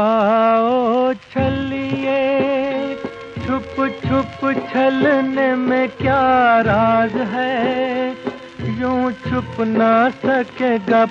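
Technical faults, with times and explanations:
4.60 to 4.63 s, corrupt frame decoded: a brief chirp-like blip lasts about 30 ms. Damaged bits in one compressed frame were decoded anyway. Misread gains and codes sent energy to wrong frequencies, peaking around -25 dBFS.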